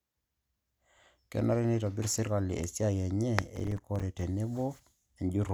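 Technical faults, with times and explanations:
3.56–4.21 s: processor overload crackle, around fifteen hard-edged silent gaps as the processor missed successive deadlines, each fitting a buffer of about 5 ms.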